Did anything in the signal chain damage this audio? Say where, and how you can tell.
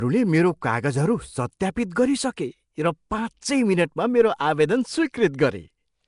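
Yes. At the codec stage, the speech carries a rough, hissy halo and smeared, underwater quality throughout, with nothing above 10.6 kHz. This is likely Nellymoser compression, which fills starved bands with noise. Unlike MP3 artefacts, it hisses rather than warbling.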